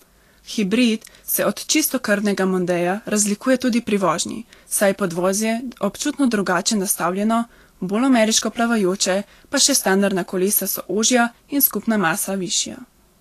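Throughout the speech, the treble turns hissy and grainy, with roughened tones and softened consonant onsets, and nothing survives above 14.2 kHz. This is likely Vorbis compression at a low setting, which fits a bitrate near 37 kbps, quantising high-frequency detail into noise-like residue.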